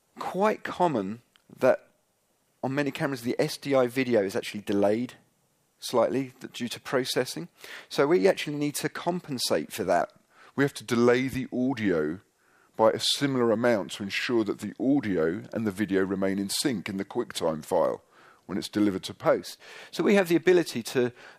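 From 10.02 s to 19.25 s there's a section at the wrong speed: it runs at 0.893 times normal, so everything drags and sits about two semitones flat, then snaps back. Most likely that stretch got played against a mismatched clock somewhere in editing or playback.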